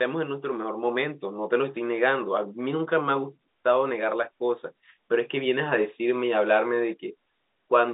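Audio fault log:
Nothing goes wrong anywhere here; the speech simply comes through ordinary G.711 telephone coding, A-law at 64 kbps, so it sits inside the usual phone band of about 250 Hz to 3.7 kHz.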